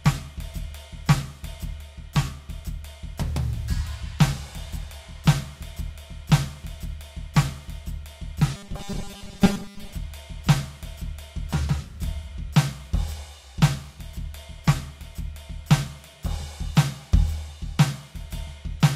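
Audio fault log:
8.56–9.93 s, robotic sound from repeated short buffers: the music turns into a rigid, metallic 200 Hz buzz, likely from one 5 ms buffer replaying over most of this stretch.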